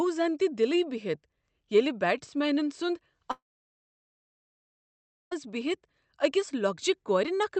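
From 3.31 s to 5.33 s the speech breaks off in what is likely a long network dropout: about two seconds of audio never arrived. The receiver stretches the last sound into a brief fading buzz, and after roughly a tenth of a second nothing is left but silence until the speech resumes with that stretch missing. A waveform shows a flat gap, and a spectrogram shows a blank band. Across the call path's 8 kHz bandwidth, energy fades out at the gap's start and returns at its end.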